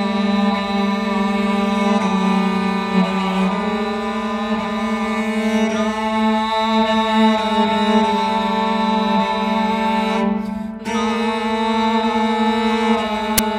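At 13.38 s, file tags played as audio: the embedded cover picture's compressed data is read as samples, producing a brief, hard-edged burst of very loud white noise.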